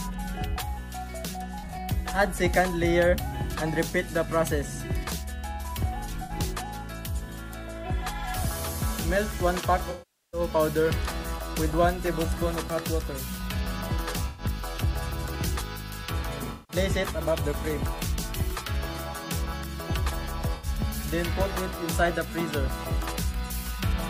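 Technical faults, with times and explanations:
1.58–1.78 s, 6.13–6.32 s, 9.90–10.41 s, 14.28–14.44 s, 16.52–16.76 s, 20.55–20.67 s: AAC frame loss with concealment. The decoder rebuilds missing frames from the last good spectrum, giving smeared, phasey patches. The longest gap, about 430 ms near 10 s, decays toward silence before fading back in.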